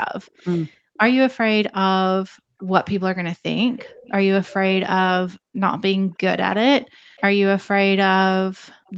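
A faint copy of the speech trails the talker by about 0.33 s from 0.26 to 4.54 s, about 25 dB down, with brief, weaker scraps at 7.16 to 7.21 s and 8.87 to 8.93 s. This is an echo leak, most likely from a far-end loudspeaker whose sound the echo canceller failed to remove fully, so the remainder returned down the line. In this speech clip, the room background also dips sharply, by as much as about 40 dB, for around half a second in total between 0.78 and 2.66 s, and for under a second across 5.39 to 8.87 s. That is background gated by the echo canceller, which clamped the microphone while the loudspeaker played and let the room sound back in once it released. The speech, carried over an Opus call path, has nothing above 8 kHz.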